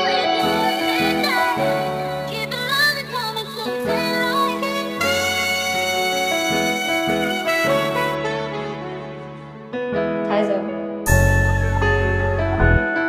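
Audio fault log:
0.39–8.15 s, sample clock jitter: the converter clock wanders by around 10 microseconds, so samples land early or late at random. The error follows the waveform's slope and sits roughly 20 dB below the signal, heard as hiss and roughness riding loud, bright passages.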